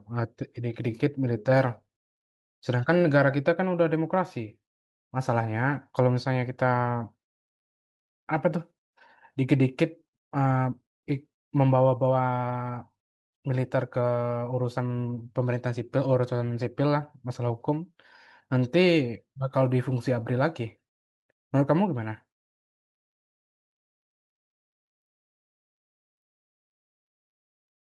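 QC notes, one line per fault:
No faults found in the speech clip. Nothing heard calls for a QC note.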